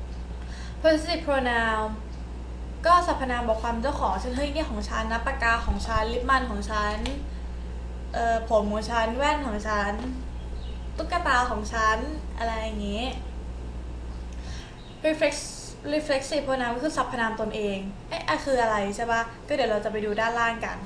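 From the start until 14.6 s, mains hum sits under the sound: a steady low tone at 60 Hz, only about 5 dB below the signal, so it is prominent. Power-line current has coupled into the signal path, through a ground loop or from a nearby transformer. A spectrogram shows a constant horizontal line at 60 Hz that stops abruptly at 14.6 s, and the waveform carries a regular low-frequency ripple beneath everything else until then.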